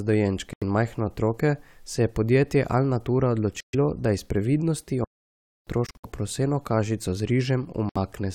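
At 0.53–0.64 s and 3.60–3.75 s the speech cuts to silence for about 85 ms and 128 ms, then resumes further on, as if it had kept playing. This is likely a Bluetooth dropout: packets reached the headphones too late and were discarded, and hole lengths fit packets of about 21 ms each. On a waveform these are flat gaps, and on a spectrogram they are blank vertical bands.

From 5.04 to 5.67 s the speech halts mid-flow for about 626 ms, then carries on. This is likely a playback stall, where the player ran short of data or was blocked. It appears as one long, clean flatline.

At 5.87–6.05 s the dropout recurs as several short holes, the longest about 64 ms. A final 64 ms dropout falls at 7.89–7.97 s.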